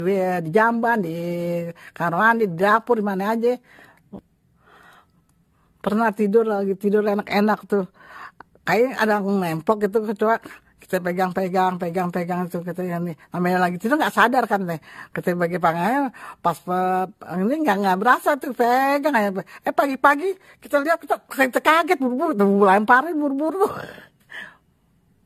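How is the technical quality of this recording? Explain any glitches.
The technical quality is compromised throughout by a single fault: generation loss across the whole speech clip. The cause is likely repeated lossy coding, with the audio decoded and re-encoded perhaps seven times through an AAC codec at a setting that sounds like 64 kbit/s. Each pass re-quantises on a shifted frame grid, so coding noise and spectral gaps pile up. Nothing survives above 14 kHz, the voice has a swirly, hollow, smeared quality, and consonant attacks lose their crispness.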